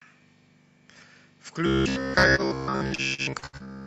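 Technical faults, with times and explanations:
1.66 to 3.87 s, robotic sound from repeated short buffers: audio likely arrived too seldom, so playback kept looping the last fragment, about 15 ms long, while fresh audio was skipped. Nearly all of this stretch is repeated material, locking the speech into a rigid metallic buzz near 66.8 Hz.
2.35 to 2.41 s, short stall from a late packet: a packet missed its playout time and the jitter buffer emptied. The receiver held the last sound for 29 ms until the packet arrived, then resumed, so nothing is lost but the sound drags briefly.
2.86 to 3.68 s, repeated packet loss (robotic sound): six separate gaps opened in the stream, the longest 71 ms. About 254 ms was patched by extending previous sound, roughly a third of the span, and 160 ms is missing, leaving choppy, robotic fragments.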